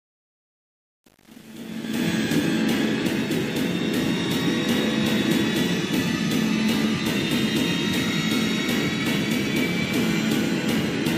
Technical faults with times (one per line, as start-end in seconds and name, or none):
0.00-2.06 truncation distortion on a fade